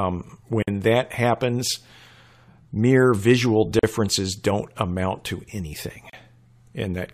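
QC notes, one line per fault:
0.63–0.68 s, 3.79–3.83 s and 6.10–6.13 s: gap at a join of encoded pieces. The speech drops out for 50, 41 and 36 ms, just before "that happens" and between "mere visual" and "don't amount to," then resumes where it stopped. Separately encoded pieces were joined untrimmed, leaving the encoder's start-up delay and end padding in. Waveform shows flat near-silence with smeared edges; spectrogram shows a narrow blank column with smeared borders.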